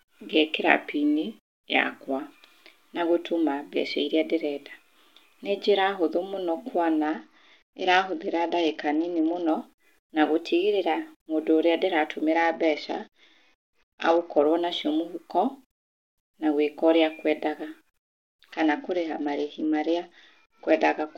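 From 0.68 to 2.19 s the speech slows by 5.6% and drops almost exactly a semitone, then snaps back. This is a drift correction step, likely from clock-matching software changing the playback rate. Speed and pitch move together, unlike a pitch-shift glitch.

Between 7.05 and 9.49 s the treble dulls and gritty noise rises. This is a Bluetooth SBC bit pool drop, consistent with the bit pool falling from 28 to 8, near 72 kbps. It differs from a dropout because the sound never stops; it just coarsens.

From 10.35 to 10.99 s, just before "mũndũ ũrĩa", a second drift step runs 5.6% fast and sharp by nearly a semitone.

The same bit pool degradation returns from 12.33 to 14.45 s, between "mũndũ ũrĩa" and "nacio mũhũko", and again from 18.53 s to the end.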